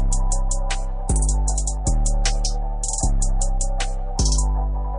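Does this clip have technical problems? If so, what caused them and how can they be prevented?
Yes. MP3 compression damage is plainly audible throughout the clip: the sound has a watery, swirling quality, with attacks smeared. This is likely heavy MP3 encoding, and the degree of damage fits a low bitrate around 40 kbps. Short of bits, the encoder discards weak frequency components, which then switch on and off between frames and cause the swirl. Encoding at a higher bitrate, or keeping a lossless copy, would prevent it.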